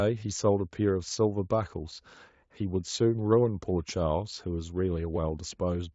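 Nothing technically wrong turns up in this bit of speech; it comes through a Speex path that's doing its job, and there's nothing here worth flagging.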